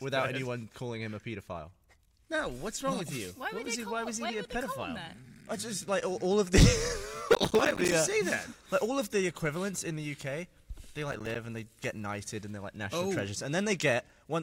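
Processor overload crackle breaks into the audio from 7.33 to 7.94 s and again from 11.12 to 11.36 s. In both bursts the processor repeatedly fails to deliver its small buffers on time, and each missed one drops out as a hard-edged gap of silence. The fast chain of dropouts, which fits buffers of around 5 ms with dozens missed in the first burst and about ten in the second, is heard as gritty crackle over the sound.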